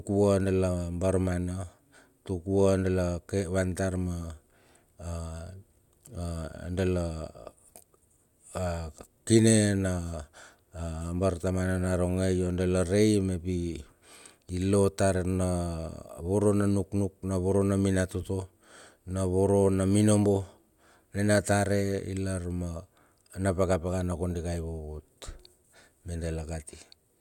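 No technical faults can be heard anywhere in the recording, so there is nothing to place on the timeline.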